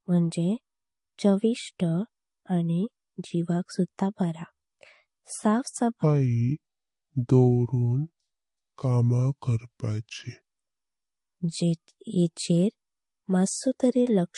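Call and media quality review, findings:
Transcoding between lossy codecs, throughout 0 to 14 s. Nothing above 11.2 kHz across the whole speech clip, with two layers of coding artefacts stacked and heard together. Likely an MP3 encode near 48 kbit/s re-encoded to Vorbis near 47 kbit/s. The second encoder spends bits on the first encoder's errors, and the lowest band limit in the chain persists.

Section at the wrong speed, 6.03 to 10.45 s. Audio plays at 0.701× speed, so it is slower and deeper, dropping roughly seven semitones, then returns to normal at 10.45 s. Speed and pitch shift together, with no time-stretching. This likely comes from an editing or playback stage running that segment against a mismatched clock.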